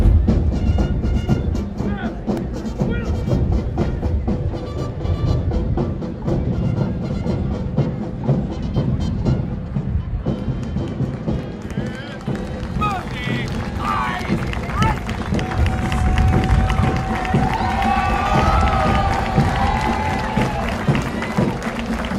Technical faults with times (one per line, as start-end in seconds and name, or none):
2.37 repeated buffer